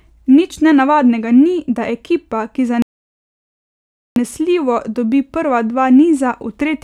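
A speech recording in which the audio cuts to dead silence mid-flow just after "da ekipa ki", from 2.82 s to 4.16 s, a gap of about 1.34 s before sound returns. This playback stall likely comes from the player running out of data or its thread being blocked.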